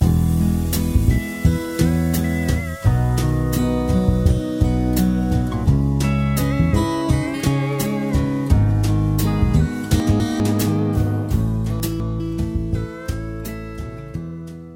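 Chunks out of order at 10.0 to 10.4 s and again at 11.8 to 12.2 s. In each spot, a 200 ms chunk of audio arrived one chunk late and was played after the chunk that should have followed it. Nothing goes missing, but the two segments swap places, leaving three hard joins where the misplaced segments meet. Each time, the audio briefly jumbles and sounds garbled.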